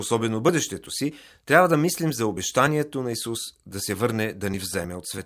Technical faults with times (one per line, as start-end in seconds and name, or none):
none